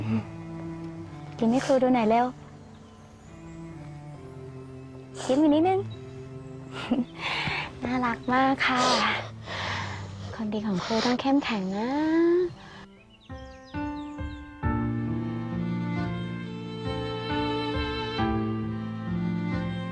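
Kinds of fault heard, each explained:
No audible faults found in this recording.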